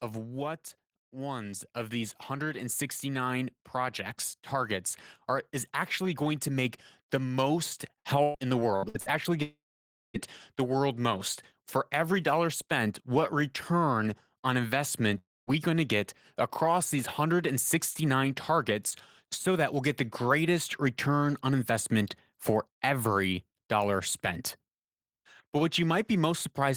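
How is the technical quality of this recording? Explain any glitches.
The recording has several audible faults: a gradual level swell near the start, a choppy robotic stretch, and two brief holes in the speech.

From 1.1 to 4.81 s, the voice and background noise grow louder together by about 6 dB. This is automatic gain rising: the gain control judged the input too quiet and slowly turned it up, lifting everything at once.

Between 7.99 and 9.09 s, the speech turns clipped and choppy, with bits missing. This is repeated packet loss. Several short holes, the longest 114 ms, were patched by stretching the preceding sound. About a third of that stretch is filler rather than real audio.

At 9.42 to 10.17 s, the speech breaks into a brief fading buzz and then goes quiet for roughly half a second before resuming with a piece gone. A shorter version occurs at 15.18 to 15.50 s. The likely cause is a long network dropout, where the receiver extended the last sound and then fell silent.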